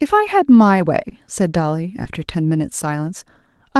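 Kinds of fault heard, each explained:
Short concealed packet loss: near 1.09 s and 2.03 s, 20 ms of audio arrived too late, so the decoder extended the preceding sound and blended back, giving a brief smear. A spectrogram shows briefly frozen or noisy harmonics, and the waveform shows a short, unnaturally regular stretch.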